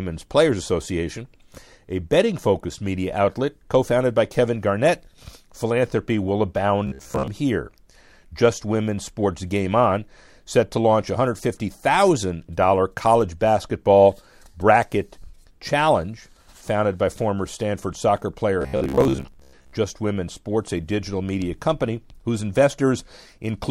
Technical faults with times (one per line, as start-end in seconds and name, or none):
6.87-7.28 robotic sound from repeated short buffers
18.62-19.74 robotic sound from repeated short buffers